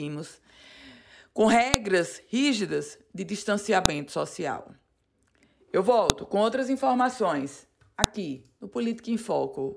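At 1.74 s, just before "rígidas de", a sharp snap cuts through the speech, and the same click recurs at 3.86 s, at 6.10 s just before "com outras informações", and at 8.04 s right after "com outras informações". Each is a file header played as audio: header bytes left at a join between pieces are played as samples. On a waveform each shows as a lone tall spike about 1 to 2 ms wide; a spectrogram shows a thin vertical line spanning all frequencies.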